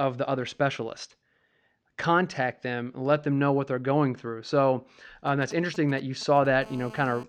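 From 5.27 to 6.47 s, GSM signalling bursts break into the speech. A 2G phone close to the recording chain is exchanging control traffic with its network. It transmits only brief clusters of radio pulses. The audio circuitry rectifies them into sound. The result is a galloping dit-dit-dit of short buzzes repeating at 217 Hz. They sit roughly 20 dB below the speech.

From 6.62 to 7.24 s, the pattern becomes continuous GSM phone buzz. A 2G phone now transmits as it would during a call, pulsing steadily at 217 Hz. The circuit rectifies every burst. This gives a hard, raspy buzz full of harmonics. It has no relation to the speech underneath. It runs at about 19 dB below the speech and holds steady until 7.24 s.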